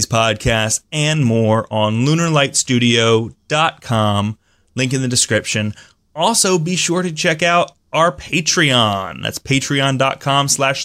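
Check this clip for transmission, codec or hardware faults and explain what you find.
Nothing here points to a transmission, codec or hardware problem, so there's no fault to report.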